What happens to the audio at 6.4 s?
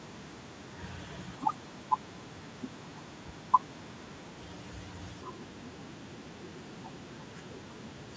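Nothing goes wrong at 6.4 s: the speech continues intact through that moment, with only the expected effect of the call's microphone processing.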